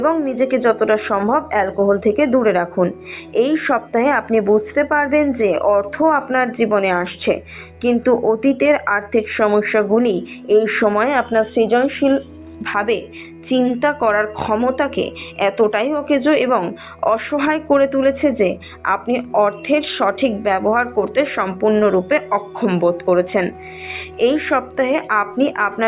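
No technical faults can be heard anywhere here.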